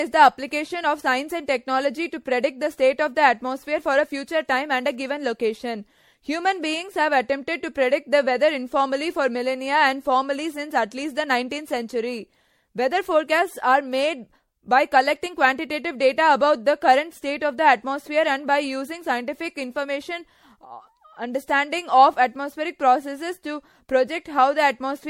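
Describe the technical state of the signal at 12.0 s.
At 12.0 s, as throughout the clip, the speech sounds swirly, hollow and smeared, with blurred attacks and nothing above 16.5 kHz. This is likely generation loss, the sound of roughly five successive MP3 passes near 64 kbit/s, each requantising on a shifted frame grid.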